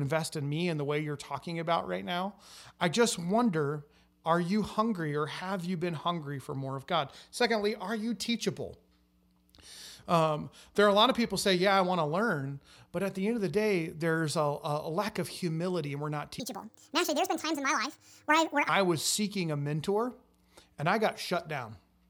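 From 16.40 s to 18.69 s, right after "humility and we're not", the speech suddenly turns chipmunk-like: high, clipped and rushed, then drops back to normal. This is a section at the wrong speed, running at 1.7 times the original rate, which lifts the pitch by roughly ten semitones because speed and pitch rise together. The likely cause is that this stretch of just over two seconds was played or rendered against a mismatched clock.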